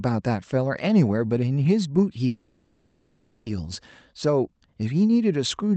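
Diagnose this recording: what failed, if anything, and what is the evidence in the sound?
A call audio freeze runs from 2.27 to 3.48 s. The speech halts and a fading buzz fills the 1.19 s gap. Speech then resumes exactly where it stopped, with nothing lost. The likely cause is late network packets emptying the jitter buffer.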